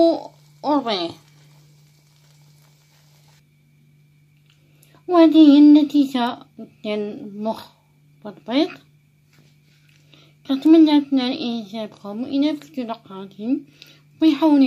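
Bit error spikes at 6.27 s and 10.66 s: each is a single corrupted sample where one bit flipped in memory or on a digital link, making the value leap by a power of two and snap straight back. The result is a lone, sharp tick peaking at about -16 dBFS, broadband and unrelated to the surrounding sound, so it stands out as a click rather than part of the audio.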